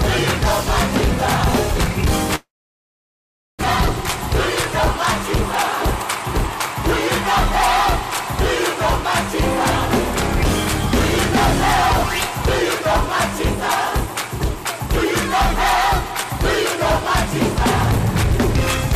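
Hard clipping runs through the whole recording. The signal reaches the converter or number-format limit with about 10 dB of overdrive, so roughly a tenth of the samples hit the ceiling and are cut flat. Those squared-off peaks generate high harmonics. At this level of overload the result is a harsh, fuzzy edge on every loud passage rather than an occasional crackle, and the distortion stays present from start to finish.

From 2.35 s to 3.65 s the audio breaks off. The last sound carries on briefly as a decaying buzz or hiss, and then there is about 1.1 s of silence before the audio resumes. The resumed audio has skipped forward, with around a second of material missing. This pattern is likely a long network dropout: packets stopped arriving, the receiver concealed the gap by extending and fading what it last had, and the lost stretch was never recovered. The playout delay also shifted by something like a fifth of a second.

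Between 13.47 s and 14.80 s the jitter buffer speed-up is audible. Too much audio had built up in the buffer, so the receiver cut the excess by repeatedly removing short pitch-period-sized pieces, some 70 ms in total. Over that span the audio plays at about 106% speed while keeping the same pitch. It sounds slightly rushed and compressed in time, and the natural pacing tightens until normal rate returns at the end of the segment.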